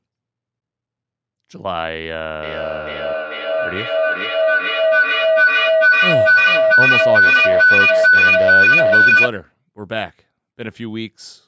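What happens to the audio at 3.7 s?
At 3.7 s a feedback howl is under way. It runs from 2.43 to 9.35 s. Two devices on the call form a loop that gains level each trip. A tone near 1.5 kHz builds, the loop repeating about every 400 ms, peaking about 12 dB above the speech.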